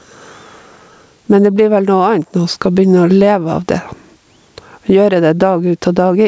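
Gain pumping throughout: the gain swings roughly 15 dB, squashing loud and soft parts closer in level, likely from excessive gain hitting a fast limiter.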